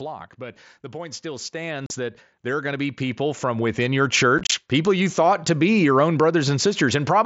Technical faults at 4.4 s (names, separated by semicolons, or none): unconcealed Bluetooth headset packet loss